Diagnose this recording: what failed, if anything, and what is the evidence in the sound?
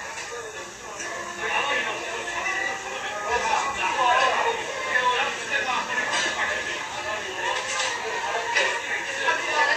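The failure sits at the codec stage. Across the whole clip the top end stops dead at 14.2 kHz, and what's left of the treble sounds hissy and grainy, with tonal parts roughened and attacks smeared. That's likely Vorbis compression at a low setting, something in the region of 34 kbps. The encoder squeezed the high band so hard that fine detail got swapped for noise of similar energy, and it's plainly audible.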